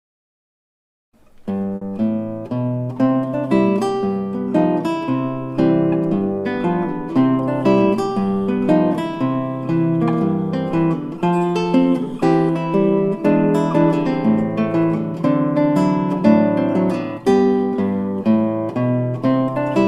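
At about 1.75 s the sound smears into a brief held buzz or fading hiss for roughly 60 ms, then jumps ahead at 1.83 s with a small stretch missing. This is a burst of packet loss: the receiver stretched and faded the last audio until newer packets arrived.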